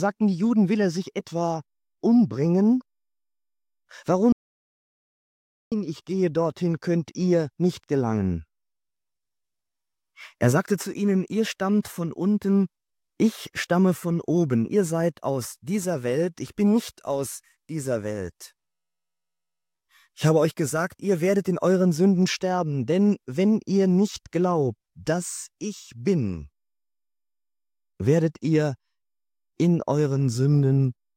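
Around 4.32 s the sound cuts to silence until 5.72 s, an audio dropout to silence of about 1.4 s, likely from a lost input feeding zeros.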